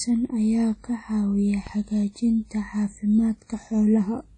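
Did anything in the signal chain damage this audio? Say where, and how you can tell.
Yes. The codec stage damaged it throughout. Codec damage is plainly audible: the speech rings and sounds washy, and nothing remains above 10 kHz. That points to a low bitrate, likely WMA compression near 32 kbps, smearing quantisation noise over long blocks.

At 1.67 s there is a DC step. The waveform's zero line jumps, heard as a low thump while the speech carries on. The offset then decays through a 5 Hz high-pass. A converter recalibrating or an offset input being switched in would cause this.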